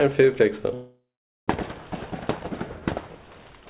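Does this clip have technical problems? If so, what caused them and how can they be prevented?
Yes. A call audio freeze runs from 0.74 to 1.50 s. The last sound stretches into a fading buzz, then about 0.48 s of silence, and the audio resumes late with nothing lost. On a spectrogram this appears as smeared, decaying bands and then a blank gap, while the waveform flattens. The likely cause is held-up packets that emptied the jitter buffer. A steadier, less congested network path, or a jitter buffer allowed to grow deeper, would prevent it.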